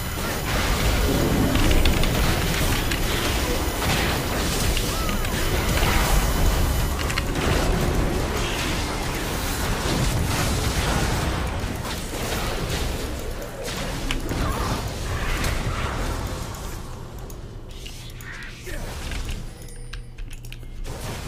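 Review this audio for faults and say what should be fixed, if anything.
A thin, steady whine runs under the sound from the start to 6.92 s, a 1 kHz series peaking at 12 kHz, roughly 15 dB below the programme. This is USB whine: current drawn in 1 ms bus frames leaks into the audio through shared power or ground. Running the interface from a clean, separate supply or fitting a USB isolator would prevent it.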